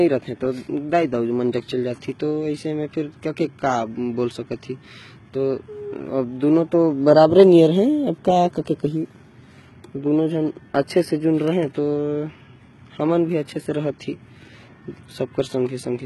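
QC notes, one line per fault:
Throughout: HE-AAC compression, likely cause of the damage heard across the whole speech clip. The upper band is synthetic: spectral band replication has copied lower content upward under a coarse envelope, so harmonics above the crossover fail to align with those below and s sounds come out gritty and lisping. Damage is heavy, which fits a bitrate near 16 kbps, and nothing is present above 11.8 kHz.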